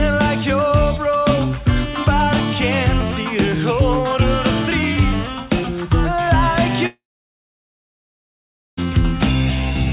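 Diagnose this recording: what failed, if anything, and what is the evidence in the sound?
Long network dropout from 6.86 to 8.79 s, likely packet loss on the network: the last sound is stretched into a fading buzz, then about 1.8 s of silence before the audio resumes.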